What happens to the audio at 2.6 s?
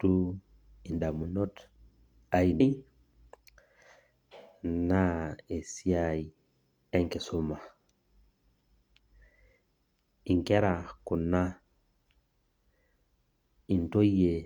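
At 2.56 to 2.61 s, damaged data in the compressed stream makes the decoder lose frame sync, producing a brief glitch heard as a chirp, squawk, click or short hole in the speech.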